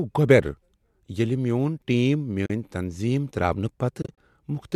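At 2.46 s there's a short soft-edged hole lasting to 2.50 s, about 40 ms of sound gone. That's AAC frame loss with muting: the decoder zeroed the missing frames' spectrum, and the overlapping windows fade the audio out and back in rather than snapping. Then from 4.02 to 4.17 s it's choppier. Roughly 100 ms goes missing in scattered gaps across about 160 ms, the longest around 30 ms. The short-frame spacing fits a low-delay AAC stream, likely AAC-ELD, which also leaves the speech a touch rough.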